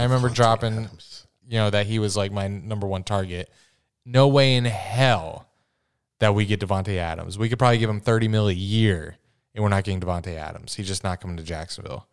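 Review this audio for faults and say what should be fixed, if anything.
Nothing needs fixing here: the speech signal holds steady throughout, with no dropouts, level jumps or added noise audible anywhere along it.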